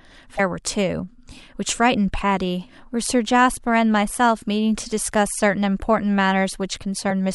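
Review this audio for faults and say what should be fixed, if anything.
Damaged data in a compressed stream shows up twice in the speech, as short glitches from 0.36 to 0.40 s and from 7.07 to 7.11 s. Bad bytes in the compressed stream made the decoder misread those frames and lose sync until it found a valid frame header, so each spot gives a disruption of about 40 ms. A plain dropout would leave silence or a soft gap instead, and clipping would flatten loud peaks into harsh distortion. Checksummed storage and transfer, with the file re-fetched or re-encoded from a clean source, would prevent this.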